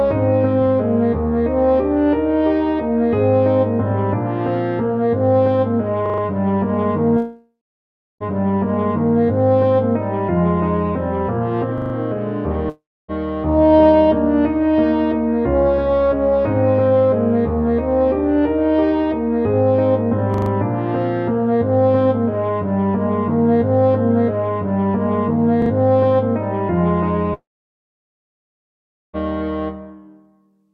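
A short machine-gun stutter at 6.06 to 6.22 s is a repeated buffer: the same 40 ms slice sounds five times in a row with a hard seam at each join, because fresh audio was late and the device replayed its last buffer four extra times. The identical stutter returns at 11.78 to 11.94 s and 20.34 to 20.50 s, and a shorter version at 25.62 to 25.70 s plays the slice twice more. The 40 ms repeat length fits a buffer of that size.

Between these, the sound breaks off at 7.17 s, trails away as a fading buzz, and goes silent for about 0.68 s before resuming at 8.27 s with roughly 1 s of material gone. The same happens at 12.69 to 13.11 s with about 0.4 s lost and some 0.28 s of silence, and at 27.34 to 29.16 s, where about 1.8 s is lost and nearly all of it is silence. These gaps are a long network dropout, likely where the receiver extended the last sound until it ran out and then returned further along.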